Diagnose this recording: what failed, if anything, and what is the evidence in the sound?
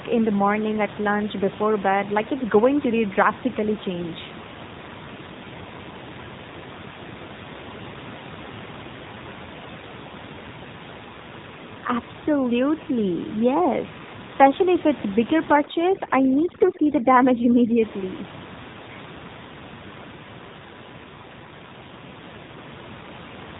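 Codec stage: an AMR narrowband mobile codec throughout. Nothing passes above 3.8 kHz, and the speech sounds buzzy and synthetic, which points to a low rate near 7.4 kbps. A plain low-pass filter would not add that buzz.

Call processing: overdone noise removal from 15.55 to 17.82 s. The room noise, about 14 dB below speech, collapses into twinkling specks. Unlike the codec damage, this effect is confined to that stretch.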